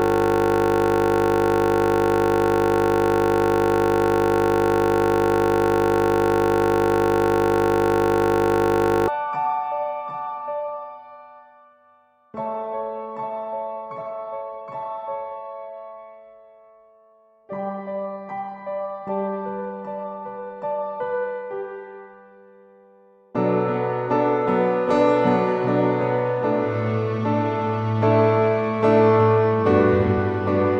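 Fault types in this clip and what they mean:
System hang loop: the playback system stalled while the audio hardware kept replaying the same short stretch of its ring buffer. Here the repeated segment is 20 ms long, so the loop recurs at 50 Hz and is heard as a steady, fixed buzz rather than a stutter. The fault is already under way when the clip begins and continues to 9.08 s, with the same 20 ms piece cycling some 450 times before normal playback resumes.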